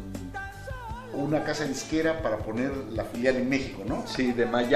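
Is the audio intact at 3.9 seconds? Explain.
Yes, the audio is intact at 3.9 seconds, with no fault at that point.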